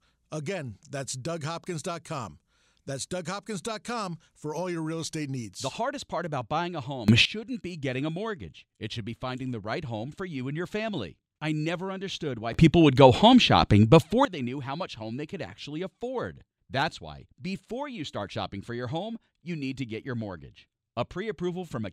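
A gain setting was likely switched without a ramp, causing a sudden gain jump of about 18 dB from 7.08 to 7.25 s after "part about buying a", and about 16 dB from 12.54 to 14.25 s after "I never understood why". Speech and background noise leap up together, then drop back.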